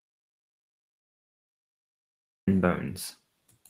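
Audio dropout to silence from the start until 2.48 s: the input was likely lost, so only silence was written, with no room tone, before speech comes back mid-flow.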